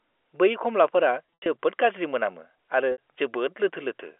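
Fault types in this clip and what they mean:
Packet loss with pitch repetition: at 1.36 to 1.46 s, right after "बै खमलाफोरा", and again at 2.92 to 2.98 s, stretches of the telephone stream went missing, about 140 ms scattered over 200 ms in the first case (longest unbroken gap 80 ms) and 60 ms in the second. The receiver covered each hole by replaying the last pitch cycle, giving a brief held, buzzy tone that fades as the gap lengthens, heard within the narrow 300 Hz to 3.4 kHz phone band.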